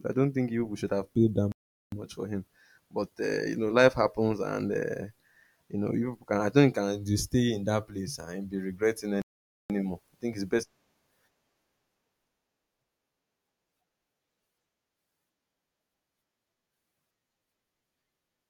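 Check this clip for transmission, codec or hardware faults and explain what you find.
Two playback stalls interrupt the speech. From 1.52 to 1.92 s, after "should have paid that", the sound cuts out for 0.40 s. It resumes with "for him but uh". From 9.22 to 9.70 s, after "place and be regretting", it stops for 0.48 s, then returns with "I think it's best". The likely cause is the player running short of data or being blocked, going silent until it recovered.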